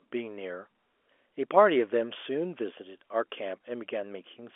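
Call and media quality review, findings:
No findings in the call and media quality review; the speech comes through the expected narrow G.711 telephone band with nothing to raise a ticket on.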